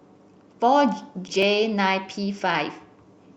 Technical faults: clock drift buffer slips; skip ahead; jitter buffer speed-up

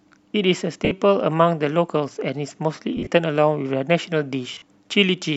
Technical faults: lost LE Audio frames

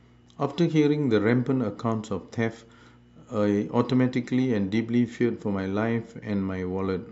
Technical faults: mains hum

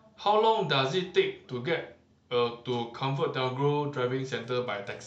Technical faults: Bluetooth SBC bit pool drop

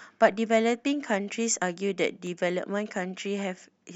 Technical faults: CD scratch ticks

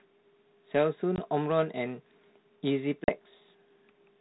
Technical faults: packet loss on an ADPCM call

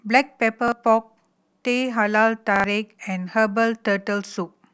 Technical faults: repeated buffer

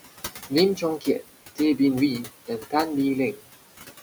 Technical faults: noise suppressor artifacts; speech cut by the noise suppressor

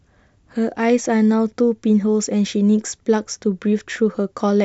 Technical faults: none

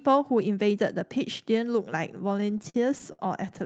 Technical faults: repeated stalls (stutter)

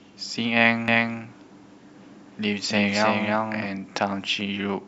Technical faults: doubled audio track

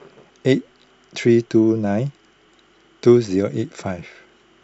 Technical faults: none

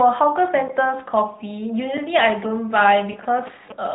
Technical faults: GSM signalling bursts; lost AMR speech frames

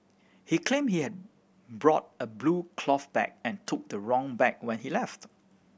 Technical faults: none

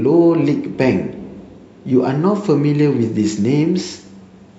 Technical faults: none

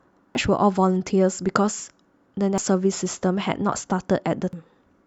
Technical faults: damaged data in a compressed stream

